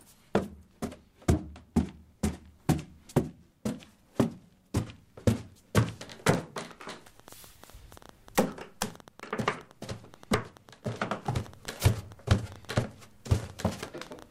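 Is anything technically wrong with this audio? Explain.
Yes, there's a train of clicks from 6.71 s to 14.23 s: around seventy pulses at about 8 per second, spaced unevenly and roughly as loud as the sound itself. It's likely interference, a faulty connection or a power supply problem injecting the same pulse repeatedly, heard as popping ticks.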